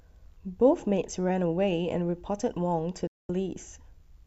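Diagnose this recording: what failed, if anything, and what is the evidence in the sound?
Speech drops to silence from 3.07 to 3.30 s, a digital broadcast dropout at the reception stage. The receiver muted for 0.22 s, which fits about nine failed frames, fading out in 3 ms. Unlike packet-loss concealment, nothing fills the gap, and that stretch is simply gone.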